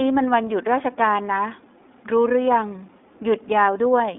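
From start to finish the speech runs through the iLBC codec, and it's easy to hear. The line is squeezed to roughly 250 Hz to 3.6 kHz, with nothing at all above 3.7 kHz, so it sounds thin and phone-like. Each 20 ms frame has its excitation coded on its own, and that gives the voice a rough, slightly synthetic grain throughout, which fits iLBC's 15.2 kbps mode.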